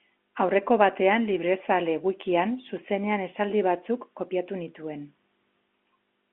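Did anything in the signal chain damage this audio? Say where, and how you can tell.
No, nothing damaged it.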